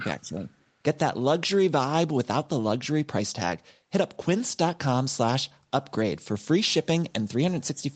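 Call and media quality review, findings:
Speech suppressed in double talk, 0.21–0.50 s: likely echo canceller misreading near-end speech as loudspeaker echo while far-end audio played, attenuating both. Speech level dips by up to about 10 dB over roughly 0.3 s.

Call path: the audio band stops at 8 kHz, which fits a wideband Opus call path at around 32 kbps. The lowest bass is removed by the call microphone high-pass filter, which is expected.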